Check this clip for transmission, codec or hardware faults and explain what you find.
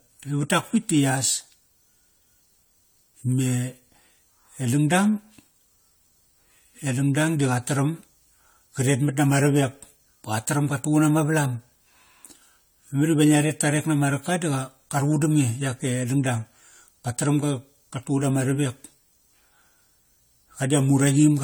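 One codec fault runs through the whole clip: generation loss. The speech was likely decoded and re-encoded several times with a lossy codec, about three passes at a quality consistent with AAC-LC at 64 kbit/s. Each pass quantised the signal again on a shifted frame grid, so noise and spectral gaps stacked up. The result sounds swirly and hollow, more smeared than that bitrate alone would produce, with consonant attacks blurred from start to finish.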